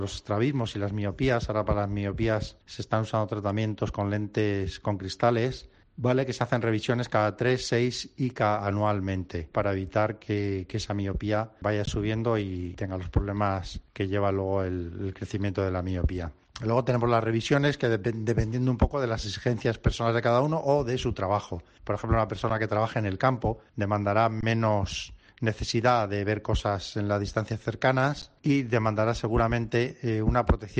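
Four underruns with held sample occur: at 11.86 s (17 ms), 22.50 s (7 ms), 24.41–24.43 s (21 ms, which fits a 1024-sample buffer) and 28.22 s (11 ms, fitting a 512-sample buffer). Each time the output buffer empties and the converter freezes on its last value, so the sound stops abruptly but nearly silently. Nothing is lost, so playback resumes where it paused with only a soft tick. The waveform shows a short flat line; the spectrogram shows a brief blank strip.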